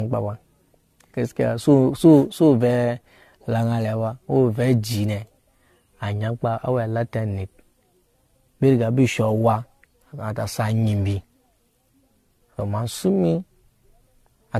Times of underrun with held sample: none

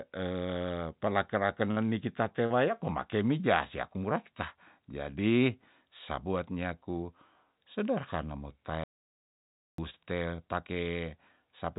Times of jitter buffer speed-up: none

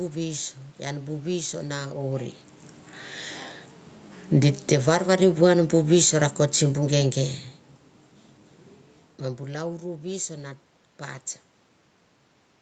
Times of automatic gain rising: 4.92-6.37

